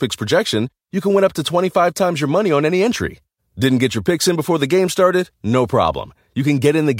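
A speech recording with no audible technical fault anywhere in the signal.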